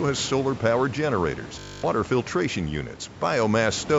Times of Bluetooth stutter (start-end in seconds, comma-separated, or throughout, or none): 1.59-1.84